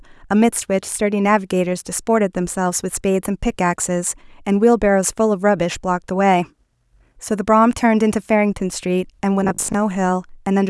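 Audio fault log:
9.44–9.74 s, robotic sound from repeated short buffers: for about 0.3 s the speech turns into a rigid, metallic buzz at 50 Hz that loosely tracks the syllables. The likely cause is audio arriving too slowly, so playback fills gaps by looping the most recent chunk, roughly 20 ms long, while the real signal is skipped. About half of the interval is repeated material. The fixed loop length stamps a constant 50 Hz pitch over the speech.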